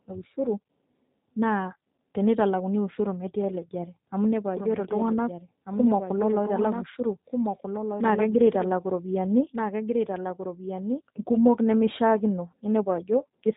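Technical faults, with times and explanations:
Throughout: G.729 codec. The sound is cut off sharply, with nothing above about 3.8 kHz. It has a rough, synthetic edge from start to finish, and the damage is plainly audible. The codec does not store the waveform. It rebuilds each 10 ms frame from a vocal tract filter, a pitch predictor and a few pulses. That model loses fine detail and gives speech its buzzy, artificial grain. The narrow band and texture fit an 8 kbit/s G.729 coder.
4.57 to 11.01 s: doubled audio track. A second copy of the speech runs underneath, roughly a second and a half behind and somewhat quieter than the main signal. It is full-band within the codec's range, with no decay or room colour, so it sounds like a clean duplicate rather than an echo. It starts abruptly at 4.57 s, right before "kumok nemishaakino", and stops just as suddenly at 11.01 s. The likely cause is the same audio being captured a second time through a slower path.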